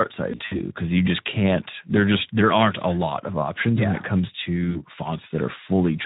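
Speex codec damage runs throughout. The speech sounds hoarse and noisy, which fits a low setting around 11 kbps. Too few bits remain for the excitation.

From 0.31 to 0.60 s, just before "because you just can't", VoIP packet loss concealed by the speech codec breaks in. About 120 ms is missing across 200 ms, in runs up to 60 ms. The decoder extends its last pitch and filter at falling gain. Sound smears into a fading buzz or coloured noise. Just after "yeah when it comes", 4.71 to 4.82 s repeats this more briefly.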